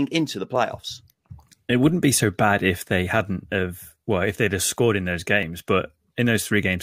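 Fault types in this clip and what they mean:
Clock drift buffer slips: a regular click, about four of them, roughly every 1.62 s from 0.56 s (just after "into the") to 5.43 s, likely from two devices on separate clocks about 700 ppm apart, so the buffer slips a few dozen samples each time.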